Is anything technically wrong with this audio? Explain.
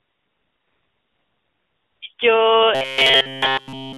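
Yes, two faults stand out in this narrowband mobile call audio, which is limited to roughly 300 Hz to 3.5 kHz.

From 0.00 to 2.02 s, and again briefly from 2.14 to 2.18 s, the background becomes a steady, smooth hiss that switches in and out. This is AMR comfort noise: the phone stopped sending speech frames and the receiver substituted synthetic noise.

From 2.75 s to the end, the speech becomes a rigid, metallic buzz at about 133 Hz throughout. This robotic sound is likely caused by repeated short buffers, and the 133 Hz pitch fits a repeated segment about 7.5 ms long.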